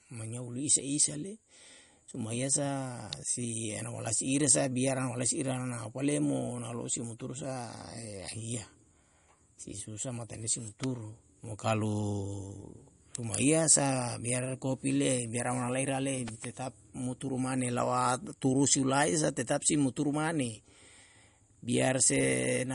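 Throughout, the speech carries audible MP3 compression damage, likely from a low bitrate of around 40 kbps: nothing above 10.6 kHz, and a watery swirl rather than broadband noise. An electrical switching spike, likely from a nearby switch or discharge, snaps at 3.13 s, at 10.84 s just after "si susa matane si", and at 16.28 s just before "tetap muturu mane lawa". Each is a sharp snap laid over the sound, unlike the continuous codec smearing.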